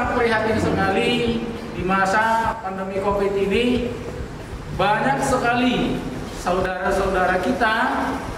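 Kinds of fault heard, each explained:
One channel drops out: The sound falls abruptly by about 6 dB from 2.53 to 2.96 s, and again from 6.66 to 6.85 s, then snaps back. The likely cause is one stereo channel briefly lost, halving the shared content after the mono sum.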